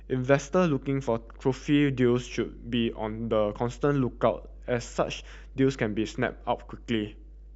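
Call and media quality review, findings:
Mains hum, throughout the clip. Steady 50 Hz low tone with low harmonics under the speech, sitting roughly 20 dB below it. Probable component: ground loop or nearby transformer coupling the power line into the analogue path before capture. Check shared grounds, cable routing, and supply isolation on the input chain.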